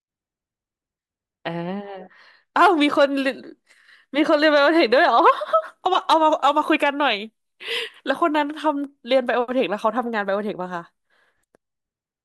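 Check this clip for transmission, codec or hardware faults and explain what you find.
No transmission, codec or hardware faults are audible anywhere in this speech recording.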